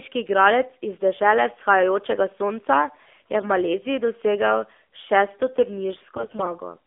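Throughout, the speech sounds thin, buzzy and somewhat synthetic, confined to a narrow telephone band of roughly 250 Hz to 3.5 kHz. This is the AMR narrowband mobile codec: the voice is rebuilt from a vocal-tract model at 8 kHz sampling, and the plainly audible coarseness fits a low mode around 7.4 kbps.

At 3.41 to 3.50 s the voice briefly turns scratchy and hoarse, then again more heavily and for longer at 6.17 to 6.47 s, where it gargles while keeping roughly its pitch and level. These are AMR bit errors. On a weak link, flipped low-priority bits misplace the excitation pulses and skew the finer pitch, gain and spectral values. The first burst fits a few percent of bits hit across a handful of frames, and the second fits a higher error rate across a dozen or more frames.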